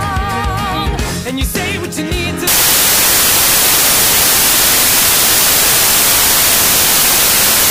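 Samples built from the wrong bytes, 2.47 s to the end: misordered bytes make jittery low bits dominate each value, giving loud, harsh broadband noise.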